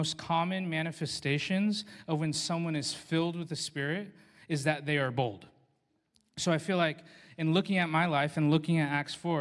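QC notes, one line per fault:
No faults found.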